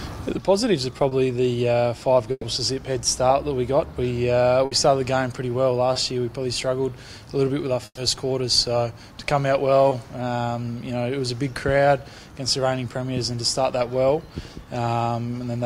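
At 1.09 s comes a short concealed packet loss. About 20 ms never arrived, and the receiver bridged it by extending the preceding sound. It is a brief smear. A burst of packet loss follows from 2.31 to 2.45 s. About 120 ms is lost. The last sound is held and faded, then about 30 ms of silence, before the audio resumes further on. Another burst at 4.65 to 4.73 s fills about 60 ms the same way. A 20 ms smear recurs at 5.93 s. At 7.85 to 7.99 s, a 120 ms burst fades into about 50 ms of silence. A final 20 ms smear comes at 9.89 s.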